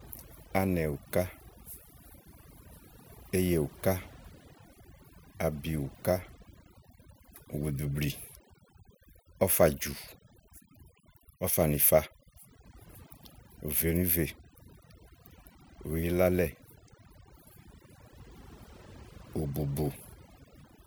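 Across the whole speech clip, overdone noise removal is at work: a noise reducer set far too aggressively pulls individual frequency bands down or out whenever they sit near its noise estimate, taking quieter parts of the voice too. Pauses fall to near silence sprinkled with twinkling specks.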